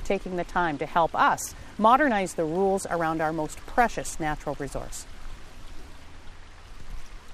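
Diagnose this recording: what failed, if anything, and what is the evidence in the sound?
From 2.91 s, a gritty, inharmonic fizz trails loud, high sound: crude rate conversion at the sample-format stage, samples dropped without filtering, which fits 48 to 44.1 kHz.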